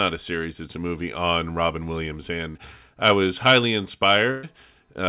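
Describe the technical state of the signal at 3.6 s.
At 3.6 s the speech is intact, with no dropout, click or distortion, only the narrow telephone-style band of the call path, which carries nothing above 4 kHz.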